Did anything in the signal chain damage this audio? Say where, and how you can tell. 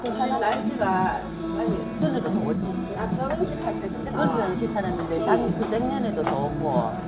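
Yes. Skip ahead at 2.02 to 2.04 s, at the network and jitter buffer stage: about a second of sound is discarded and the two sides join directly. Unlike a dropout, no silence or concealment fills the jump.

Jitter buffer speed-up from 2.19 to 6.24 s: the buffer trims pitch-period slices, about 0.7 s in total, so the sound runs at 114% speed. Unlike a resampling error, pitch stays unchanged.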